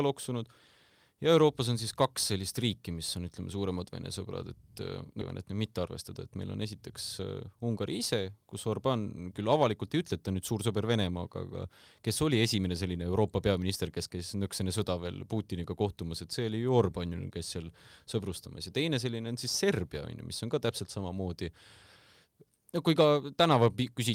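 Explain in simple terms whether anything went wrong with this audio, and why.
Two things went wrong, both within a few seconds of each other.

At 5.21 to 5.23 s there is a skip ahead. About 0.4 s of speech never gets played. The sound jumps straight from before the gap to after it, with no silence in between. A chunk was dropped, either on the way or by the player, while later audio was already waiting to be played. A listener simply misses a piece of what was said.

Right after that comes jitter buffer speed-up, in two bursts. From 5.51 to 5.79 s the speech runs about 11% fast. From 6.37 to 8.00 s it runs about 6% fast. The pitch stays the same, so it just sounds a bit rushed. The player was still holding more audio than it wanted. It snipped out many tiny slivers to shrink that backlog, roughly 40 ms in the first burst and about 100 ms in the second.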